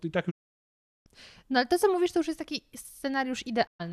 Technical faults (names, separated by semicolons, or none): digital broadcast dropout